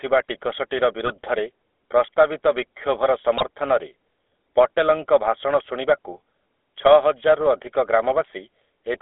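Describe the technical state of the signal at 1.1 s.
GSM bit errors strike from 1.06 to 1.13 s, a burst of about 64 ms that fits roughly three corrupted 20 ms frames. Flipped bits on the link reached the speech decoder and scrambled the filter, pitch and gain values it rebuilds each frame from. The spectrum bends and the level lurches, so the speech breaks into a short gargling squawk with pops before settling again. The amount of damage in so brief a span points to a fairly high error rate.

The GSM full-rate codec is audible here as it is across the whole clip. The decoder rebuilds the speech from a vocal-tract model driven by regularly spaced pulses, keeping only every third excitation sample, which fits a 13 kbps full-rate stream. Nothing survives above the 3.5 kHz top of the 300 Hz to 3.5 kHz line band. The voice comes through plainly buzzy and gravelly, and that roughness sits underneath the burst.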